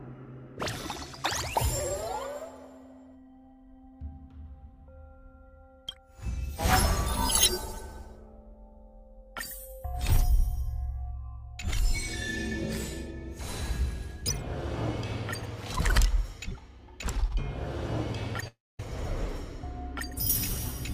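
At 18.40 s and again at 18.44 s there are two short concealed packet losses. About 20 ms and then 10 ms of audio failed to arrive in time. The receiver covered each gap by extending the preceding sound. Each one is heard as a brief smear or wobble.

From 18.48 s to 18.80 s comes a long dropout, likely a network dropout. About 0.31 s of audio is missing. The last sound is stretched into a fading buzz or hiss, followed by roughly a quarter second of silence. The audio then resumes with that stretch gone.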